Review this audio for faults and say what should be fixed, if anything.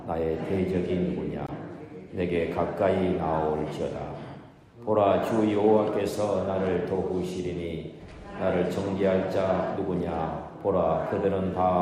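At 1.47 s the sound drops out to complete silence for about 18 ms, then carries on. The gap is most likely a Bluetooth stall: radio interference delayed packets, the headphones' buffer emptied, and output halted until retransmitted audio arrived. On a waveform it appears as a sudden flat line with abrupt edges; a spectrogram shows a thin, full-height vertical blank stripe. Prevent it by reducing interference or increasing the receiver's buffer depth.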